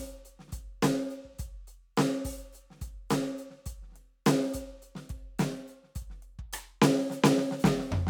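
Nothing goes wrong technically anywhere in this bit of music, so there's no fault to point to at any moment.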